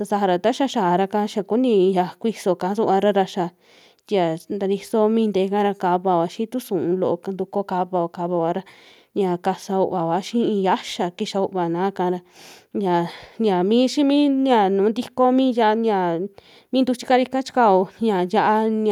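No technical faults are audible anywhere in this speech recording.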